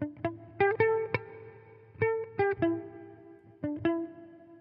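Nothing in the everyday sounds of this recording stood out on listening.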